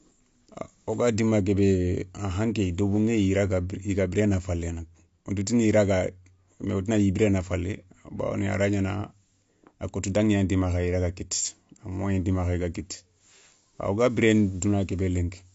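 Speech, with AAC compression throughout: likely a low-bitrate AAC-LC encode, consistent with about 32 kbps, that cuts everything above 7.6 kHz and leaves the sound dull, smeared and plainly warbling.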